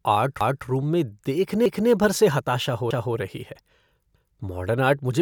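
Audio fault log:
0.41–0.66 s, 1.66–1.91 s, 2.91–3.16 s, 4.16–4.41 s: overlapping chunks. Each 1.0 s chunk starts 250 ms before the previous one ended, so that stretch plays twice. The speech stutters every 1.25 s, just before "भर से", "रही है" and "मॉडर्न आर्ट मुझे".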